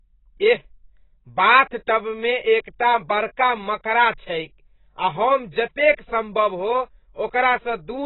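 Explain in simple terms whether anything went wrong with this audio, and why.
The speech was likely squeezed hard by AAC compression, which cuts everything above 4 kHz, so from start to finish it sounds dull, muffled and warbly.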